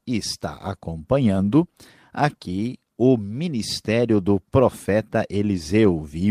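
No faults can be heard anywhere in the recording.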